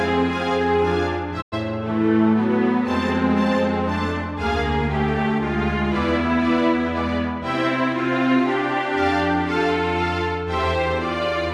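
At 1.40 s the sound fades out over about 20 ms and stays silent until 1.54 s, a digital broadcast dropout. The receiver muted when frames failed, losing 96 ms of programme, which fits three lost frames. Waveform and spectrogram show a short tapered fade into a completely blank gap.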